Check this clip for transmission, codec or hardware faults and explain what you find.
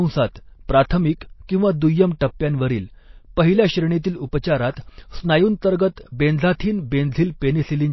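One fault runs through the whole clip. MP3 compression, throughout: the encoder, likely starved of bits at a rate near 24 kbps, cuts everything above 5.8 kHz and toggles weak frequency lines, so the speech sounds dull, watery and smeared.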